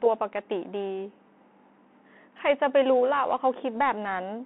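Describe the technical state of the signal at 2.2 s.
At 2.2 s the speech sits inside the Bluetooth CVSD headset codec, which runs through the whole clip. The band is held to roughly 200 Hz to 3.4 kHz, so it sounds thin and phone-like. CVSD sends one bit per sample, only up or down, with an adapting step, which fits a 64 kbps stream. Fast, loud high content outruns the step and distorts. Sibilants turn scratchy, and a granular hiss sits under the speech.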